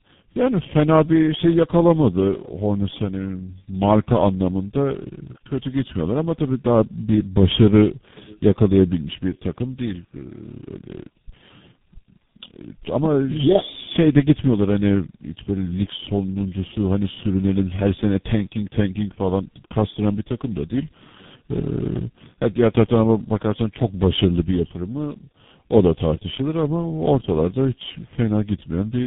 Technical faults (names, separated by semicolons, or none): tandem speech coding